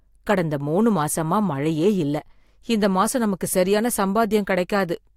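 A short speech recording with no technical fault to be heard anywhere in it. There is nothing here that needs a time or a cause attached.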